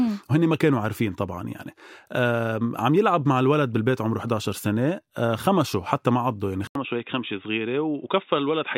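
At 6.67 s the input likely switched to a poorer device: after an 80 ms gap, speech loses everything above 3.8 kHz, drops by about 5 dB, and gains faint new noise.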